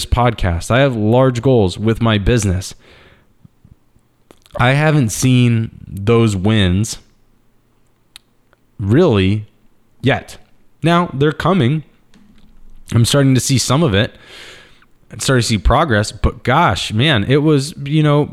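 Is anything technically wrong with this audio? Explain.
No, the signal has no technical faults that a listener can pick out.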